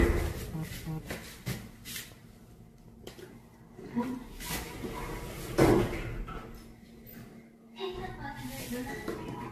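Throughout, the sound is swirly, smeared and hollow, with blurred attacks and nothing above 14 kHz, likely generation loss from around ten passes through a lossy codec such as AAC-LC at 64 kbit/s.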